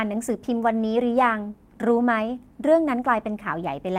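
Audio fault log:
0.79–0.81 s, lost packet rebuilt from error correction: a brief rough, noisy patch without any gap, as the following packet's low-bitrate copy filled the missing 20 ms.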